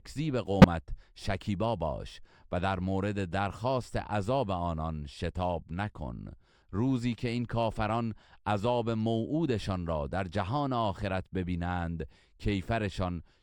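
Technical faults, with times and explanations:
0.62 to 0.65 s, corrupt frame decoded: a brief chirp, squeak or blip cuts into the speech for about 30 ms, roughly one frame's worth. Flipped bits inside that compressed frame led the decoder to misread its gains and codes, so it rebuilt energy at the wrong frequencies, peaking around -10 dBFS. On a spectrogram it shows as a narrow vertical patch of stray energy unrelated to the surrounding speech; the waveform shows a short, abrupt spike.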